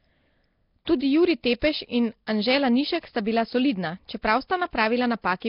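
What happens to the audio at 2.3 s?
Pre-echo at about 2.27 s: a sharp attack lands late in a transform block, and the codec's quantisation noise, scaled to that loud onset, spreads across the block into the quiet moment just before it. The result is a brief hiss of roughly 11 ms ahead of the attack, which itself sounds softened and smeared. Underneath, the whole passage is band-limited with nothing above 5.3 kHz, and carries a rough, hissy halo and a smeared, underwater quality. The likely cause is heavy Nellymoser compression, which fits a bitrate around 22 kbps.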